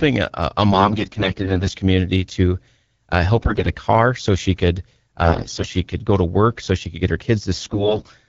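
AMR bit errors strike four times: 0.71 to 1.72 s just after "a a", 3.36 to 3.71 s before "car so she could", 5.24 to 5.73 s, and 7.53 to 8.08 s after "she could get her". Roughly 10 to 15 percent of the weakly protected frame bits arrive flipped, so excitation pulses and the fine pitch, gain and spectral values decode wrongly. The speech keeps its pitch and loudness but turns hoarse, scratchy and gargly. A spectrogram shows harmonics breaking into smeared, noisy striations, and the waveform keeps its envelope with a ragged fine structure. Between the bursts, the clean wideband speech fits AMR-WB at 12.65 kbit/s.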